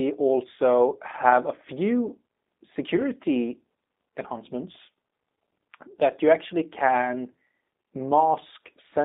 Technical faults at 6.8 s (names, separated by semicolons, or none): G.729 codec